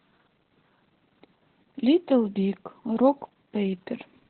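From start to finish the speech carries heavy Opus voice compression. Nothing is present above about 4.2 kHz, so the band has been narrowed to telephone width and sibilants and consonant detail are gone. The coarse excitation coding leaves the voice muffled, hoarse and faintly robotic. That pattern points to the SILK linear-prediction coder in narrowband mode at a very low bitrate, around 8 kbps, working in 20 ms frames.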